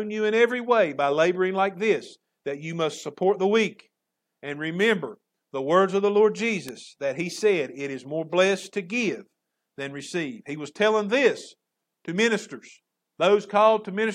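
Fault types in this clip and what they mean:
Bit error spike: at 6.69 s, just before "that he said", a single sharp tick cuts into the speech, peaking at about -12 dBFS and lasting only two samples. A flipped bit in a stored or transmitted sample value made the waveform leap by a power of two and snap straight back. Because the jump has no relation to the surrounding signal, its energy spreads across the whole spectrum, producing a brief broadband click rather than any tonal or pitched disturbance.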